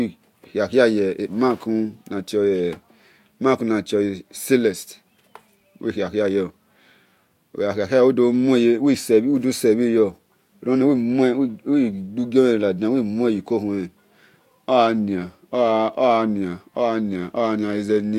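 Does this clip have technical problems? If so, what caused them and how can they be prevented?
No, nothing technical stands out in this one, so there's nothing here that needs preventing.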